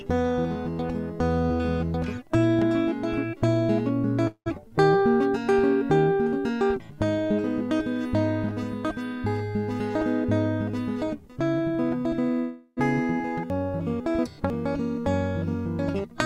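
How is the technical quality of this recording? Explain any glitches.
The recording has several transmission faults: two freezes, two spells of jitter buffer speed-up and one out-of-order jump in the music.

Call audio freeze, 4.27 to 4.48 s and 12.39 to 12.79 s. The music stalls and the last sound is stretched into a fading buzz, with about 80 ms and 40 ms of silence at the tail. This likely happened because delayed packets emptied the jitter buffer. The filled gaps last 185 ms and 374 ms. Unlike a dropout, no music is lost: playback resumes exactly where it stopped, just later.

Jitter buffer speed-up, 9.95 to 10.26 s at 121% speed and 10.70 to 12.07 s at 108%. After the backlog of late audio arrived, the receiver trimmed tiny pitch-period slices, roughly 70 ms and then about 100 ms in total, to shrink the delay. The music hurries and its tempo wobbles, but the pitch stays put. That is what separates this from a tape-style speed change, where pitch would rise along with the speed.

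Chunks out of order, 13.5 to 14.5 s. A 500 ms chunk arrived one chunk late and plays after the section that should follow it. Nothing is missing or repeated. Instead, the passage sounds jumbled, with three hard joins. A skip would lose material and a stutter would repeat it, but here the same music is simply heard in the wrong sequence.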